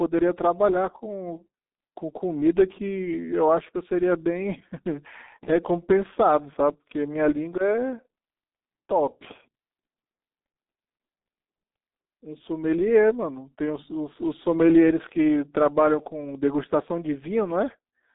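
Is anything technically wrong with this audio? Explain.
Yes. Throughout, the speech carries G.723.1 codec damage: a 200 Hz to 3.7 kHz band, nothing above 3.8 kHz, muffled hoarse tone and smeared consonants, consistent with a roughly 6 kbit/s, 30 ms-frame coder.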